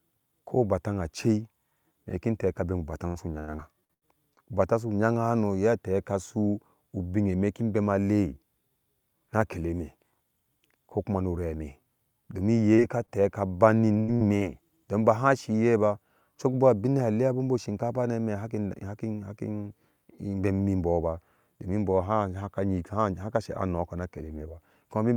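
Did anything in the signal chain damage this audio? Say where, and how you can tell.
Yes. The damage is all at the network stage, where packets reach the receiver's jitter buffer and decoder, and it shows up as four kinds of fault in this speech.

Repeated packet loss (robotic sound) occurs from 3.07 to 4.39 s and again from 13.92 to 14.43 s. The first stretch has seven holes, the longest 92 ms. The second has four, the longest 83 ms, so 40% of that span is synthetic. Each hole is patched by extending the last sound, and about 0.2 s of real audio is lost in each stretch. The patches follow each other closely, which gives the choppy texture. A single loss would only smear, and a stall would lose nothing.

Short concealed packet loss occurs from 12.74 to 12.81 s. About 40 ms never arrived, and the decoder filled it with a continuation of the preceding sound before crossfading back. It is one isolated event with audio actually missing, so it is heard as a brief smear or wobble, and it does not repeat the way the robotic stretches do.

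A short stall from a late packet occurs from 13.06 to 13.11 s. A packet was late, the buffer ran dry, and the receiver held the last sound for about 21 ms until the packet arrived. Playback then resumed from the same point. Nothing is missing, only a slightly overlong sustain with a slight buzz or dip. Delay grows by that 21 ms. The concealed loss just before it skipped material instead.

A jitter buffer speed-up runs from 16.08 to 16.54 s. The buffer had built up excess delay, and the receiver trimmed it by cutting out pitch-period-sized slices, roughly 40 ms in total. Over that half-second the speech runs about 7% fast with no change in pitch, so it sounds hurried rather than high. Tape-style speed errors shift pitch, and concealment leaves holes or holds sounds, so neither fits this.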